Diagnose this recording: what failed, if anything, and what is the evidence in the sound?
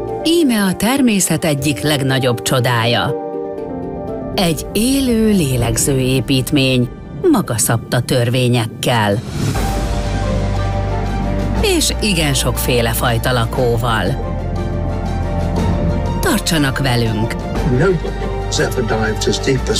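Nothing failed; no stage shows a fault here.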